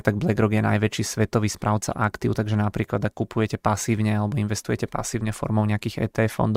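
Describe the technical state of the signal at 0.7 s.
Nothing is wrong with the signal at 0.7 s; the speech runs intact through that moment with no audible fault.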